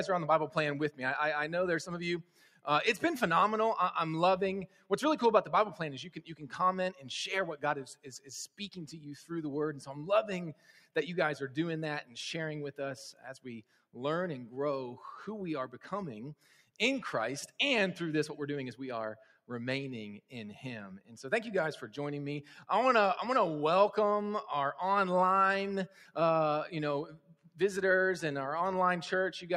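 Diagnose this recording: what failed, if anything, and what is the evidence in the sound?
The failure sits in the call-processing stage: a noise suppressor designed for speech was left on for this material. Across the whole recording, sustained content and ambient tails are treated as noise and pulled down while transients pass, so the level swings by around 5 dB and the sound pumps and thins. The suppressor's gain is following the steady, non-impulsive parts of the signal rather than any real noise floor.

The clearest evidence is where the noise suppressor turns the sound down hardest, at 0.91–2.66 s, 4.67–8.6 s, 10.54–13.95 s, 16.4–17.57 s, 19.26–21.11 s and 25.89–27.59 s. In each span, held or decaying sound sinks by about 11 to 12 dB at its deepest, for well under a second in total, while onsets stay intact. The suppressor's noise estimate has latched onto those sustained components and is attenuating them as background.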